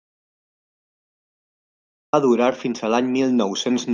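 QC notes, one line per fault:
0.00–2.13 s, audio dropout to silence: the clip opens on dead digital silence with no room tone until speech cuts in at "va durar fins a"; the input was likely lost while recording continued.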